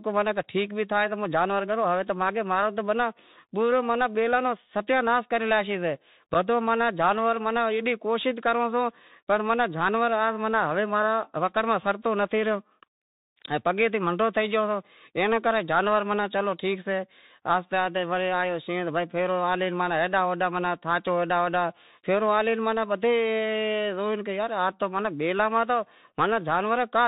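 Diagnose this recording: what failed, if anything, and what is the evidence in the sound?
Codec stage: a Bluetooth CVSD headset codec throughout. Nothing passes above 4 kHz, s sounds turn scratchy, and granular hiss sits underneath. Its one-bit, 64 kHz slope tracking adds grit that plain band-limiting lacks.

Wireless link: an unconcealed Bluetooth headset packet loss at 6.34 s leaves an abrupt 7.5 ms hole, likely a couple of lost packets. The audio returns briefly quieter as CVSD re-adapts, which a buffer dropout would not do.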